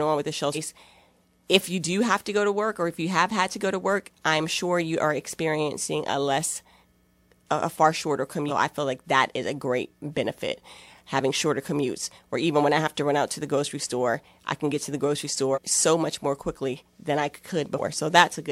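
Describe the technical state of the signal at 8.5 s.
Compressed frames skipped at 8.48 to 8.51 s, between "a a far shorter" and "I feel like that". About ten 46.4 ms frames never decode, so the speech jumps ahead about half a second. Overlapping frames smear the join into a brief blip. A spectrogram shows an abrupt content break without a sharp vertical click line.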